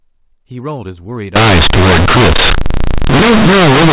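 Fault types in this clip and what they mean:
Companded audio read as linear: from 1.36 s to the end, A-law telephone bytes are played as plain linear 8-bit samples with no expansion, so each sign change swings the output across about half its range. Quiet passages become as loud as peaks, giving harsh, buzzy distortion and heavy noise in pauses. The waveform turns into a dense block, and the spectrogram fills with broadband energy up to the 4 kHz telephone ceiling.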